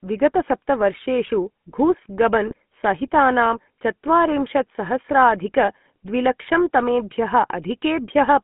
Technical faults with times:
0.00-8.44 GSM full-rate codec
2.47-2.54 GSM bit errors

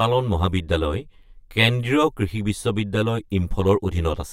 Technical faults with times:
0.00-4.32 channel delay (comb filtering)

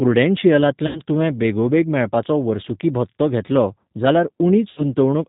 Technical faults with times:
0.00-5.28 G.729 codec
0.87-1.00 VoIP packet loss concealed by the speech codec
4.71-4.84 VoIP packet loss concealed by the speech codec

